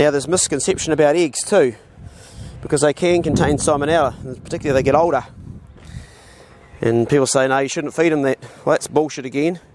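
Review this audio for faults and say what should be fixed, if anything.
No faults; nothing needs fixing.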